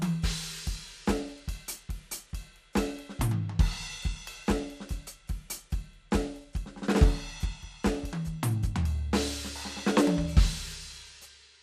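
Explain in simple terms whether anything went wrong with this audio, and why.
The music sounds dull and muffled all the way through, with a gurgling, grainy roughness, and nothing above 15 kHz. The likely cause is MP2 compression squeezed too hard, which switches off the upper frequency bands and crudely simplifies what remains.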